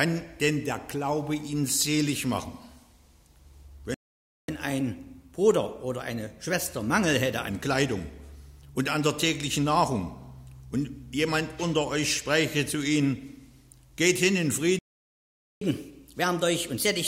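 At 3.94 s the sound cuts out for 0.54 s, and again at 14.79 s for 0.82 s. These are playback stalls, likely the player running out of data. Unlike a dropout that skips material, the sound resumes where it stopped. After each gap comes catch-up at higher speed: from 4.48 to 7.48 s the audio runs 1.1 times fast, about one and a half semitones sharp, then settles back to normal. From 15.61 s to the end it runs 1.15 times fast, about two semitones up. Pitch and tempo rise together, which separates this from a pitch-shift fault.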